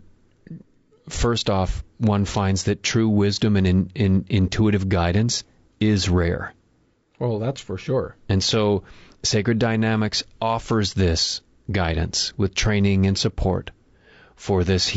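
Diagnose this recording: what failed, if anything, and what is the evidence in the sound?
The fault sits in the codec stage. Across the whole speech clip the voice sounds rough and grainy, and the damage is plainly audible. Noise fills the gaps between the pitch harmonics, and the upper band sounds thin and synthetic. The likely cause is low-delay AAC compression, such as AAC-ELD. Its short frames smear the harmonic structure and eat into the bit budget. The degree of damage fits a bitrate near 32 kbps.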